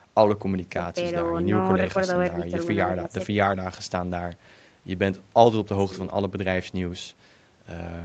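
Nothing stood out on listening to this speech, which has passed through ordinary call microphone processing.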